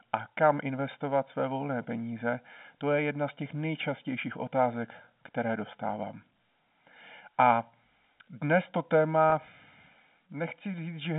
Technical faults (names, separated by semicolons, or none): channel delay (comb filtering); packet loss with pitch repetition